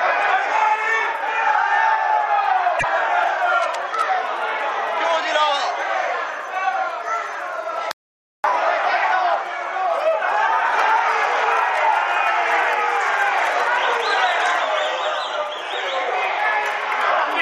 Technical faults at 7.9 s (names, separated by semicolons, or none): audio dropout to silence